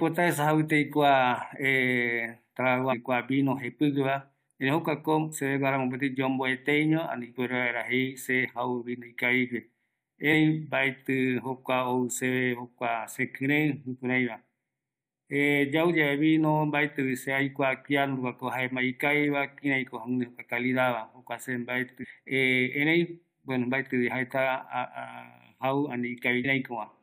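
A speech clip with damaged data in a compressed stream at three points. The first runs from 2.91 to 2.93 s. The second runs from 22.02 to 22.05 s. The third is a brief hit at 26.44 s. Each is a short chirp, squawk, click or hole cutting into the speech. At these spots the compressed data is corrupt. The decoder misreads the affected frames, loses its place and hunts for the next valid frame header before playback recovers.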